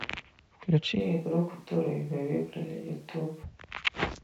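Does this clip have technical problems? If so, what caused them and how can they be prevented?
Yes. From 1.02 s to 3.42 s the speech abruptly turns roomy and hollow, loses low end, and drops by roughly 5 dB, with room noise sitting noticeably closer, around 35 dB below the speech. It snaps back just as suddenly. This is likely a switch to a distant microphone: the close mic's feed dropped out and a far pickup, such as a camera mic, carried the section instead. Prevention: monitor the close mic's feed continuously and secure its connection and power.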